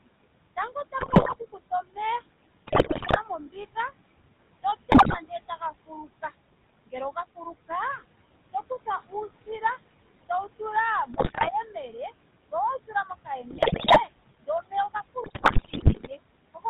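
Noise suppressor artifacts run through the whole speech recording: the room noise, about 14 dB below the speech, is pulled down by about 20 dB between phrases and swells back under them. The GSM full-rate codec gives the voice a plainly buzzy, gravelly edge with nothing above 4 kHz, which fits 13 kbps GSM. Speech cut by the noise suppressor occurs at 0.56–3.76 s, 4.63–6.33 s, 6.86–9.62 s and 10.29–16.65 s: soft consonants and word endings are mistaken for noise and dip by about 18 to 21 dB, sounding swallowed for a few hundred milliseconds to about a second per stretch. GSM bit errors occur at 0.98–1.36 s, 2.66–3.19 s, 4.92–5.19 s, 11.14–11.5 s, 13.5–14.02 s and 15.24–16.08 s: corrupted filter, pitch and gain values reach the decoder, producing squawks, pops and gargling that point to a weak radio link.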